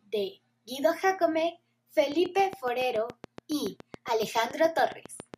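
A train of clicks runs from 2.12 s to 5.35 s: roughly twenty near-identical pulses at a steady 7.15 per second, ticking over the speech and through its pauses alike. Each click peaks at about 5 dB above the speech level, so the pulses stand clear of it. The even spacing and unchanging shape point to a repeating external source, likely electrical interference from nearby equipment or a faulty connection or power supply injecting a pulse on each cycle.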